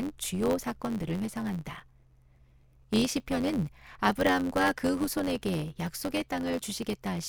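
One stage in the chain hands on longer blocks than the next stage reads, so the tail of every block is dropped. That is a block size mismatch (truncated), present for the whole clip. The speech carries a steady buzz at about 92 Hz, the rate at which blocks arrive, which fits 512-sample blocks. Because part of each block is missing, the speech runs about 1.07 times fast while keeping its timbre.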